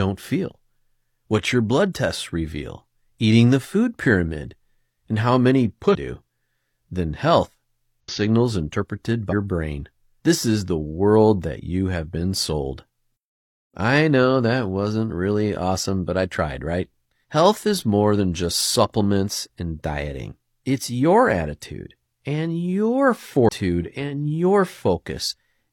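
Brief glitches break the speech at 5.91–5.95 s after "pyramid and how many", 8.00–8.10 s after "then health", 9.28–9.33 s and 23.45–23.49 s: damaged data in a compressed stream, where corrupted frames knock the decoder out of sync until it finds the next frame header.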